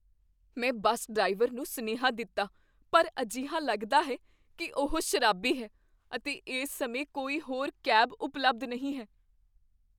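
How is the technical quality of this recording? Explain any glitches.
No technical glitches can be heard anywhere in this speech recording. Nothing in the signal stands out as a problem from beginning to end.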